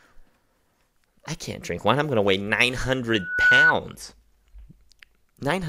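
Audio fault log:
3.12 to 3.73 s, loudspeaker feedback squeal: a 1.5 kHz tone swells over roughly a third of a second to sit about 10 dB above the speech. The microphone is hearing its own loudspeaker, and at that one frequency the loop gain passes unity, so the tone keeps feeding itself.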